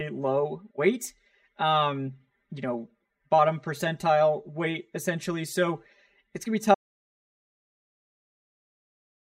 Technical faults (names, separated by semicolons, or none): channel delay (comb filtering); audio dropout to silence